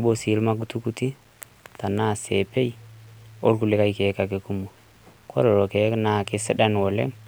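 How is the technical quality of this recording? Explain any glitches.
The recording has one audible fault running through the whole speech clip: low bit depth without dither, throughout. The audio likely sits at about 9 bits, rounded with no dither, so the error tracks the speech itself. Quiet passages turn gritty and grainy, with distortion roughly 40 dB below the signal.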